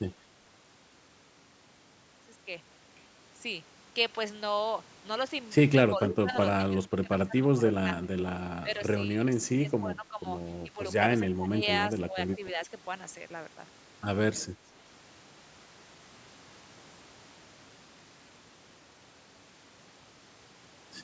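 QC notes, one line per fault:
5.91–12.68 s, speech suppressed in double talk: the level dips by up to about 15 dB across roughly 3 s in pieces, likely the echo canceller ducking this talker while the far side speaks. Unlike a fade, it comes in chopped gaps rather than one smooth slope.
6.04–6.36 s, echo leak: a delayed copy of the voice, about 281 ms late and about 10 dB below the speech, is heard, likely loudspeaker pickup that the canceller missed. The repeat lag distinguishes it from room reverb.
12.45–12.50 s and 14.37–14.43 s, echo leak: brief, faint scraps about 30 dB down return at about 283–284 ms, likely residual loudspeaker echo. The repeated fixed delay marks them as echo rather than noise.
14.55–14.60 s, speech suppressed in double talk: a short dip of about 5 dB, likely brief canceller ducking right after the echo scrap. Its short, sudden drop sets it apart from a fade or dropout.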